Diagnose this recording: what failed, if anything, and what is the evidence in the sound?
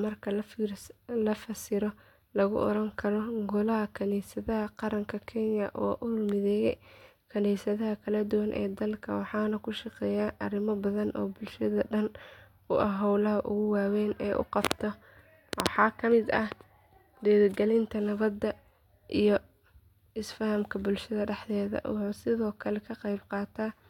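No fault found in this recording.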